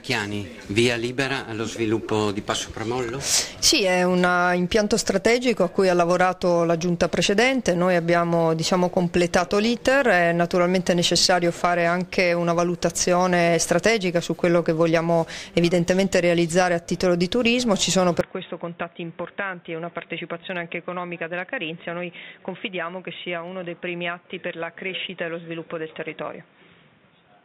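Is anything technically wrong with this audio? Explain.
Yes. From 18.2 s to the end, the sound abruptly turns dull and boxy, likely because the input switched to a poorer device. Nothing survives above 3.8 kHz, so a spectrogram shows a hard ceiling. The waveform shrinks by about 10 dB, with new background noise roughly 30 dB below the signal.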